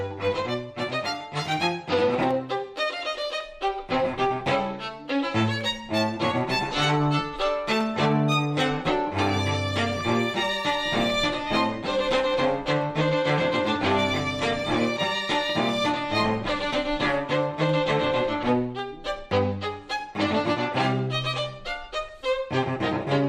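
A click or pop comes through about every 1.1 seconds, from 0.11 s right to 23.18 s, around twenty of them at a very steady rate. That regularity is the giveaway for clock drift buffer slips. The likely cause is two devices on separate clocks that disagree by something like 150 ppm, so the buffer between them creeps until a handful of samples gets dropped or repeated, and the cycle starts again.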